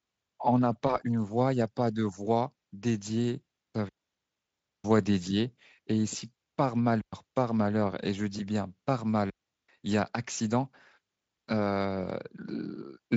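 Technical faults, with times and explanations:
0.87–0.96 s, VoIP packet loss concealed by the speech codec: one frame of about 20 ms went missing, and the decoder filled it by extrapolating the last pitch and filter at falling gain. This gives a brief buzzy or noise-like, smeared fade that lingers after the loss, not a clean gap.
3.89–4.84 s, 7.01–7.13 s and 9.30–9.69 s, digital wireless dropout: the receiver lost too much data and muted for about 956 ms, 115 ms and 388 ms. Each mute is a clean hole of near silence with no noise burst and no buzzy concealment tail.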